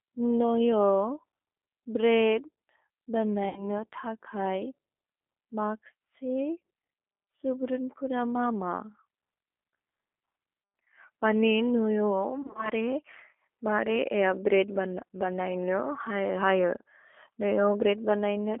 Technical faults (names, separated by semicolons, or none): G.729 codec; VoIP packet loss concealed by the speech codec